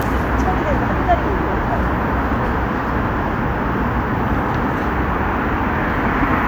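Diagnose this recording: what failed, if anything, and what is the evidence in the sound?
Nothing failed: no stage in the chain, from wiring and conversion through processing, transmission, storage and playback, leaves an audible mark anywhere in these sounds.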